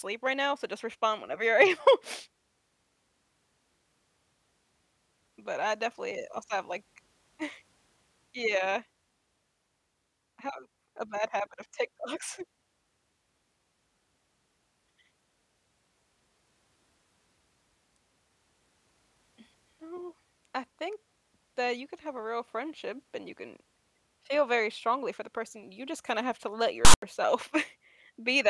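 At 26.85 s the decoder reads a block of text metadata as though it were audio. Those character bytes become sample values, which sit mostly on one side of zero, so they play as a loud, lopsided rasp. The zero padding after the text decodes to silence. This file tags played as audio fault gives a hard-edged burst of static that runs to 27.02 s, about 0.18 s in all, cutting into the speech with no fade in or out.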